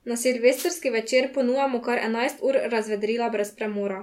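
A wireless microphone noise hit runs from 0.54 to 0.71 s, a brief swish of static laid over the speech for under a fifth of a second. It comes from the radio link of an analogue FM microphone: reflected copies of the transmitted signal arrive out of phase and partly cancel, so the receiver loses signal strength. As the carrier weakens, the receiver's own noise rises to the surface before the signal recovers.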